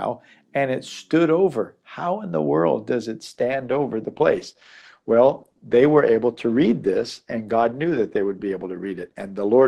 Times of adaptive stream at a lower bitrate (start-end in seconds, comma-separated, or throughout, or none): 3.27-9.68